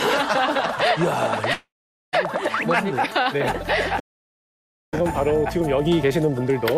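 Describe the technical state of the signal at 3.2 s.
Between 3.23 and 3.38 s there's a short stall from a late packet. The jitter buffer ran dry, so the last sound is held for 16 ms with a slight buzz or dip.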